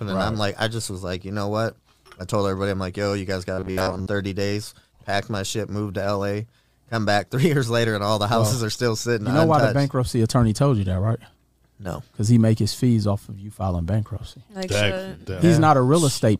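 From 3.52 to 4.07 s the sound goes robotic: a stiff, metallic buzz locked at about 94 Hz. That's likely robotic sound from repeated short buffers, roughly 10.7 ms chunks looping while fresh audio arrived too slowly, so most of that stretch is repeats.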